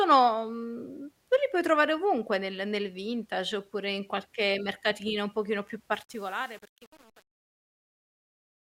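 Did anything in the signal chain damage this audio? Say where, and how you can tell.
Yes, there's truncation distortion on the fade-out, from about 5.94 s to the end at 8.61 s. The fade itself starts around 6 s, and as the level drops the tail gets gritty, which fits a fade or gain stage keeping only about 8 bits with no dither. Near the smallest step the waveform collapses into a few square steps, so the quiet end sounds gritty.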